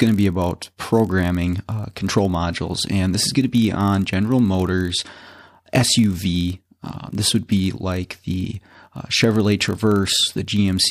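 Throughout the clip there is a block size mismatch (padded): one stage hands over slightly shorter blocks than the next stage reads, and the shortfall in each block is filled with silence. The 43.1 Hz repeat fits a 1024-sample read. Each tiny gap breaks the waveform at that rate, so a steady low buzz sits under the speech. The padding adds so little that the audio runs at 0.999 of normal speed, with pitch essentially unchanged.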